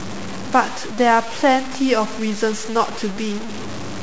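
Grainy, signal-following distortion runs throughout the speech, with the error only about 15 dB below it. This points to low bit depth without dither, likely 5-bit truncation.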